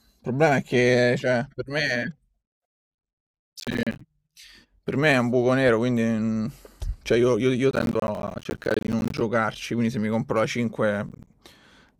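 Gritty, tearing crackle rides over the speech at 3.60–4.01 s, 7.71–9.21 s and 11.09–11.33 s. This is processor overload crackle: the processor repeatedly misses deadlines on what sound like roughly 10 ms buffers, leaving hard-edged silent gaps.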